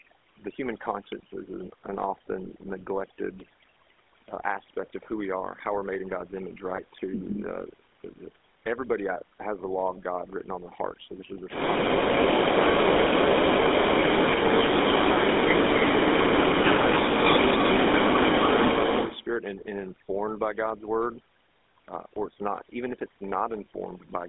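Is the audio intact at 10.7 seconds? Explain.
No. At 10.7 s the speech carries two faults that run through the whole clip. Overdone noise removal has pushed the background down and broken it up into little twinkling specks, and the denoiser has clawed away quieter parts of the voice along with the noise. It's aggressive gating of individual frequency bands. Any band that sits close to the tool's noise estimate gets dropped hard or shut off.

On top of that you hear the GSM full-rate codec, plainly audible at its 13 kbps. It models the vocal tract and excites it with evenly spaced pulses that keep only a third of the excitation samples, and that's where the buzzy, gravelly roughness comes from. The line band is about 250 Hz to 3.6 kHz, so everything above that is gone and the low end is thin. The call's microphone processing only rolls off the deepest bass, which is normal.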